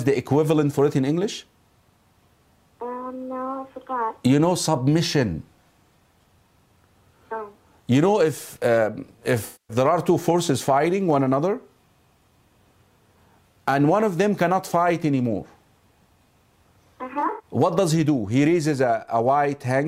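A smeared, noisy patch runs from 9.45 to 9.77 s, and a broken, phasey stretch from 17.14 to 17.45 s. Both are AAC frame loss with concealment, where the decoder rebuilt missing frames from the last good spectrum. The first gap is a solid run of about 0.23 s. The second scatters about 0.15 s of loss over 0.26 s, in runs of up to roughly a tenth of a second.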